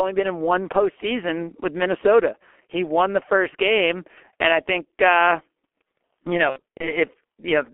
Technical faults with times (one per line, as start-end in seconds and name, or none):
0.00-7.74 G.723.1 codec
6.50-6.92 VoIP packet loss concealed by the speech codec